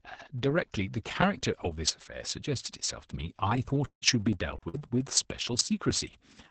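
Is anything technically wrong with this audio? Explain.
Yes. The speech has three kinds of transmission fault, all packed between about 3.85 and 5.0 s.

Long network dropout, 3.85 to 4.04 s: audio stopped arriving. The receiver stretched the last sound into a fading buzz or hiss for about 160 ms, then left about 100 ms of near-silence. Roughly 120 ms of speech is gone. This is likely a network stall with a delay shift of roughly 40 ms.

Lost packet rebuilt from error correction at 4.01 to 4.22 s, 4.56 to 4.62 s, 4.74 to 4.78 s, 4.79 s, and 4.93 to 4.99 s: each lost packet was replaced by the low-bitrate backup copy carried in the next packet. The speech stays continuous but turns briefly rougher and noisier, for 15 to 60 ms per event.

Burst of packet loss, 4.68 to 4.79 s: several consecutive packets failed to arrive in time. About 50 ms was filled by continuing and fading the preceding sound into a held buzz or hiss. 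About 60 ms of speech is missing when the audio resumes.

These faults sit on an Opus call path with audio limited to about 8 kHz. The bitrate is about 20 kbps.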